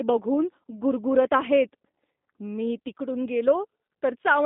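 Speech runs through the whole clip under plainly audible G.729 codec damage. It sounds rough and synthetic, consistent with 8 kbit/s model-based coding. The band runs 200 Hz to 3.7 kHz, with nothing above.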